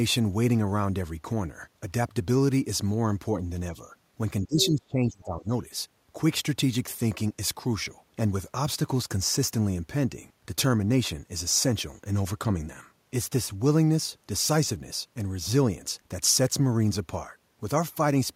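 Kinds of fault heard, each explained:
speech suppressed in double talk: From 4.46 to 5.5 s the speech drops sharply, by roughly 25 dB, likely an echo canceller turning down both sides during overlap.
other side's voice leaking through: A brief scrap of a second voice, about 10 dB under the speech, from 4.61 to 4.66 s, likely loudspeaker echo left unremoved.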